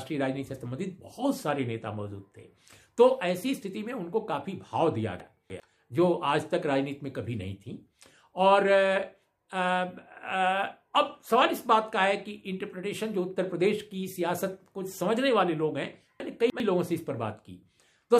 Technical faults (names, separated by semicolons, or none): chunks out of order